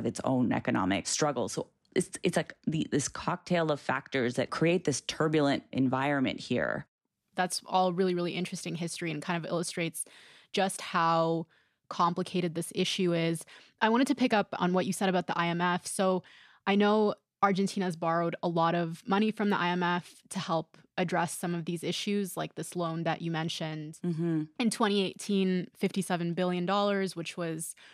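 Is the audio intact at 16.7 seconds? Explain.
Yes, the speech at 16.7 seconds plays through intact, with no dropout, click, distortion or other fault audible at that moment.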